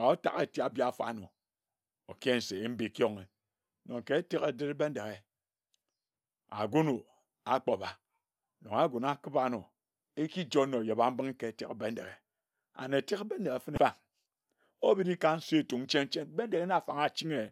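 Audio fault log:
13.74–13.78 s, damaged data in a compressed stream: corrupted frames confuse the decoder, which loses sync and resyncs on the next header, leaving a brief blip in the speech.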